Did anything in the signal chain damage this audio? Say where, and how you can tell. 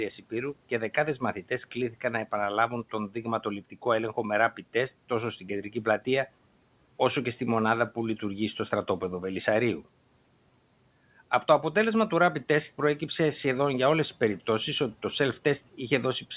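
Yes. Speech cut by the noise suppressor, a call-processing fault, hits twice: between 3.61 and 3.84 s, and between 5.41 and 5.86 s. In each window, about a tenth of a second of speech sinks by up to about 10 dB, leaving those sounds faint and swallowed. The suppressor mistook low-level speech for the room noise, which sits about 26 dB under the speech, and turned it down with the background. Packet loss or a codec dropout would instead leave a gap or a warbling patch, not a brief, smooth dip in level.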